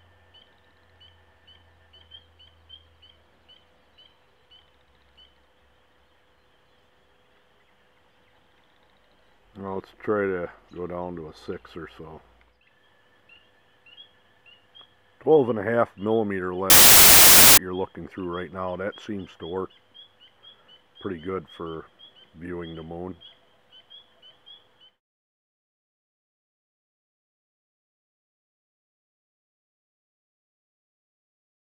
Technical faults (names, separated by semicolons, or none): wrong sample width